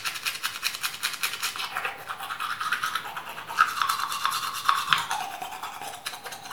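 No technical faults can be heard anywhere in this clip of sounds.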